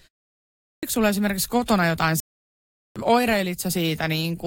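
At 0.39 s the speech comes in with a clipped start after a pause. About 0.4 s of silence precedes it. The output device has apparently gone idle and needs time to wake. The first 440 ms or so of sound is lost, up to 0.83 s. Speech then begins abruptly, already in progress, with "sulla esimerkiksi kotona jotain". Its opening sounds are missing.

Right after "sulla esimerkiksi kotona jotain", at 2.20 s, there is a playback stall. The sound cuts out in mid-flow for about 760 ms, until 2.96 s. The player likely ran short of data or had its thread blocked. The output falls silent during the gap. Speech then resumes. The break is clearly audible as a hard hole in the flow, not a natural pause.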